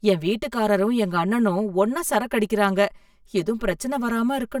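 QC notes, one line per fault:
Throughout, channel delay (comb filtering): one channel lags by about 5 ms, so the mono sum cancels at evenly spaced notches from around 100 Hz upward, sounding hollow and phasey.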